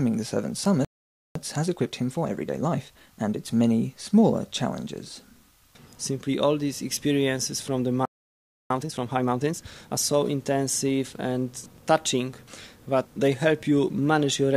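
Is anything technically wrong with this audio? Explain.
Yes, there are two playback stalls, each followed by a stretch of time-compressed catch-up.

The audio drops out mid-flow from 0.85 to 1.35 s (about half a second) and again from 8.05 to 8.70 s (about 0.65 s), then picks up again. That's a playback stall, likely the player running dry on buffered data or its thread getting blocked.

Right after each gap, the player works off its backlog by snipping out tiny slices and cross-fading the joins. From 1.35 to 3.37 s the sound runs at 1.25x, and from 8.70 to 9.98 s at 1.5x. Both stretches feel rushed at normal pitch, and the second is noticeably hastier.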